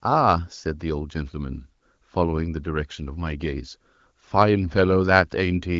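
No technical faults can be heard in this speech, which carries the narrower top end typical of an AMR wideband (HD Voice) call.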